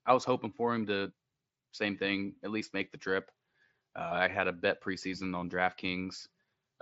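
No faults are present; the speech comes through the Bluetooth mSBC headset link as expected, band-limited to about 8 kHz.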